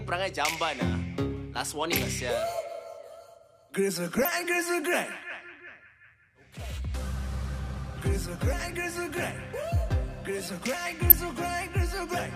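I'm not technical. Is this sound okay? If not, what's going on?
No. DAB burbling at 1.96–2.00 s, 4.14–4.28 s and 11.10–11.12 s: weak digital radio reception garbles the audio data into brief blips of noise.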